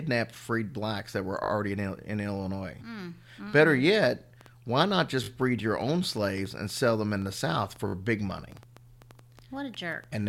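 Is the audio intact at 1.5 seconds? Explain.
No. A repeated buffer runs from 1.44 to 1.5 s: fresh audio arrived late, so one 20 ms block played three extra times. It sounds like a brief buzzy stutter; the waveform shows four identical 20 ms segments, with vertical lines at each hard join on a spectrogram.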